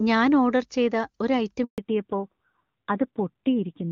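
A handover gap runs from 1.64 to 1.78 s, right after "ഒരു ഐറ്റം": the call switched networks and no speech frames arrived for 140 ms, so the voice cuts off abruptly and anything said in that stretch is simply missing.

A fallback to narrowband follows at 1.78 s and lasts to the end. The new link carries only a narrowband codec, and the sound loses everything above 4 kHz, turning duller and rougher, consistent with AMR-NB at around 7.4 kbit/s replacing the earlier clean HD Voice.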